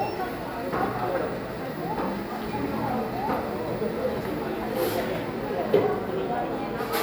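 A short recording of everyday sounds, and there's nothing technically wrong to point to anywhere in it.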